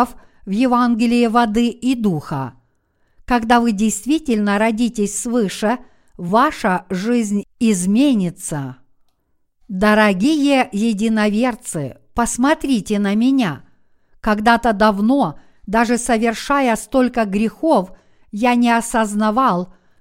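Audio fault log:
No faults detected across the speech recording.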